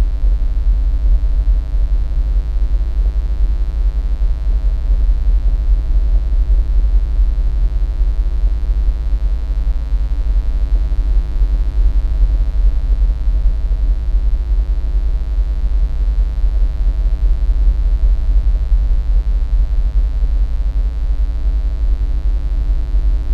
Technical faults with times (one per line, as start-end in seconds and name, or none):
0.00-23.34 mains buzz